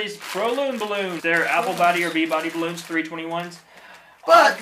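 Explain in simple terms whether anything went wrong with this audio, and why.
A brief glitch from 1.19 to 1.21 s is damaged data in a compressed stream: corrupted bytes garble the decoder's output, unlike a plain dropout, which goes silent.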